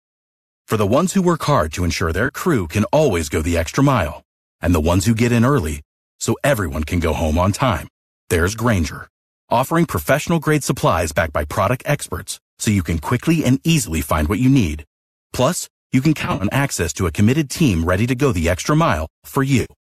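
At 2.26 s, between "hard to ensure their" and "can always go the", a 30 ms AAC frame loss with concealment leaves a brief smeared, noisy patch. It is refilled from the previous spectrum rather than clicking or dropping to silence. A longer, broken version runs from 16.22 to 16.44 s, after "you can", with about 120 ms lost in runs up to roughly 50 ms. A final 90 ms gap at 19.61 s is concealed the same way. All of this sits over the light graininess of the low-delay AAC stream, which likely comes from AAC-ELD at 64 kbps.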